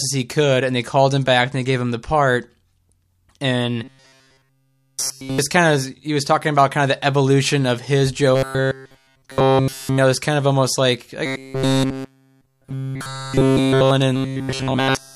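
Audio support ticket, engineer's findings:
Robotic sound from repeated short buffers at 3.84–5.39 s, 8.35–9.98 s (after "the evolution of his", before "know this kind of"), 11.26–13.91 s (after "kind of almost like") and 14.16–15.16 s. Fixed 133 Hz metallic buzz through each span, roughly following the voice. The period of about 7.5 ms likely points to starved playback looping the last buffer. This differs from comb filtering because the pitch is fixed and the real audio is missing.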